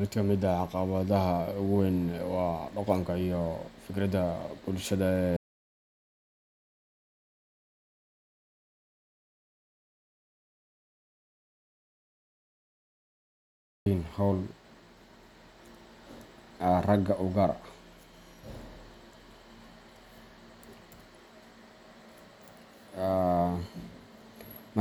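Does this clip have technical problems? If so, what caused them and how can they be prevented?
Yes. There is an audio dropout to silence from 5.37 s to 13.86 s. The speech cuts off mid-flow just after "dhaqanka iyo fikirka bulshada". About 8.5 seconds then pass in silence, with no room tone at all. The input signal was likely lost, through a disconnected device, a failed link or an accidental mute, while the recorder kept writing silence. Anything spoken in that gap is gone. Secure connections, watch input meters, and record a backup track.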